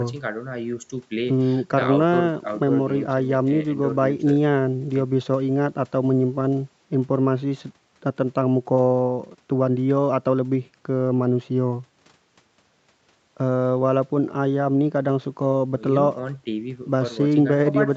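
The speech carries the normal marks of a call chain, with the microphone processing's high-pass trimming the lowest bass and a top band that stops at 8 kHz, which fits a wideband call codec, and no technical faults are present.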